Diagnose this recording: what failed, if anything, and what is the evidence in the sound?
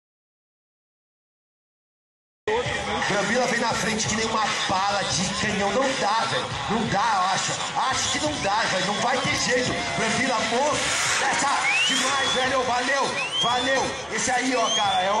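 The recording begins inside an audio dropout to silence that runs from 0.0 s to about 2.48 s. For that stretch the signal is silent, with no room tone, hiss or noise floor, and the sound then enters abruptly mid-flow rather than fading up. That pattern points to the capture input, likely a disconnected device, failed link or mute upstream, while the recorder kept writing empty samples. Whatever occurred during the gap is unrecoverable.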